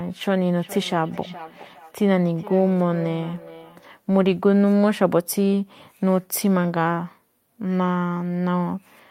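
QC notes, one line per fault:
0.55–3.91 s, feedback echo between two devices: the speech returns roughly every 0.4 s, peaking about 17 dB below the direct sound, because a second device replays it into the microphone and no canceller removes it. A spectrogram shows fainter, evenly spaced copies of each syllable; the waveform shows trailing repeated bursts.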